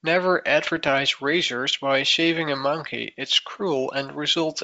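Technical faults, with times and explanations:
0.64 to 0.93 s, bit errors on an ADPCM link: pops and rough, crackly bursts with brief jumps in level. The error rate is low, on the order of a tenth of a percent. Each flipped bit corrupts the decoder's step size and predictor, not just one sample. The damage therefore rings on for a few milliseconds after each hit. The hits cluster to form one rough stretch. Elsewhere the 64 kbit/s G.722 wideband sound is clear.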